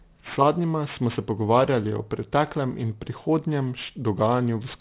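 Aliasing throughout: energy above 4 kHz folds back, fitting an unfiltered drop to 8 kHz sampling; sibilants turn gritty, spectrogram packed right to 4 kHz.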